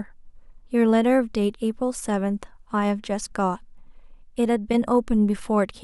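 Speech, with one short burst at 4.72 to 4.74 s that has the signature of a corrupt frame decoded. Bit errors in the compressed stream led the decoder to misread gains and spectral codes for what sounds like a couple of consecutive frames. It still played them, placing energy where the speech has none. The result is a brief, fairly loud glitch peaking somewhere around -15 dBFS, lasting only as long as the damaged frames.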